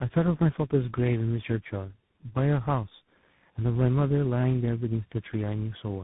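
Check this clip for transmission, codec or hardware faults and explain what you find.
One fault runs through the whole clip: tandem speech coding. The sound points to about four speech codecs in series, ending in a CVSD-type coder, each re-encoding the last one's degraded output. Errors compound, leaving speech rough, muffled and warbly, with nothing above 3.8 kHz.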